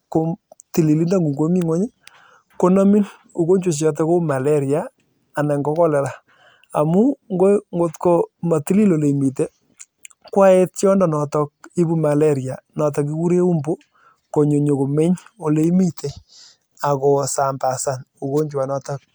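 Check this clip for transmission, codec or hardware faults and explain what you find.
No faults are audible anywhere in this speech recording.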